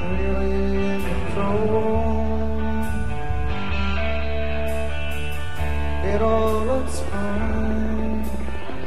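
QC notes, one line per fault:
6.10–8.85 s, train of clicks: a steady ticking of about 14.3 clicks per second, around forty in all, each much the same shape and about as loud as the sound itself. The evenly spaced pulses likely come from electrical interference or a faulty connection or power supply.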